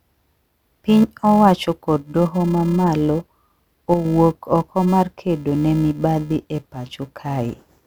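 A filter restarted on every block runs through the whole speech clip. Its state is cleared at each block boundary, so each block starts with a small transient. The result is a steady 375 Hz buzz, consistent with a 128-sample buffer at 48 kHz, that rises and falls with the speech level.

From 3.94 to 4.05 s, and again from 6.75 to 6.87 s, the level drops abruptly by about 6 dB and then recovers. The likely cause is one channel dropping out: the mono sum loses half of the shared content, and anything present only in that channel vanishes.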